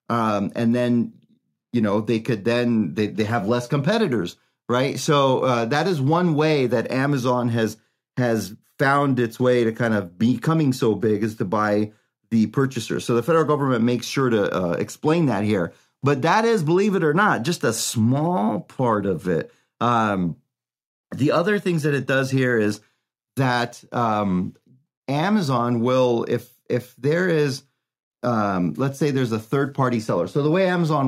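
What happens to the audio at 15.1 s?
Nothing goes wrong at 15.1 s; the speech carries on intact through that moment, with no dropout, click or other fault to be heard.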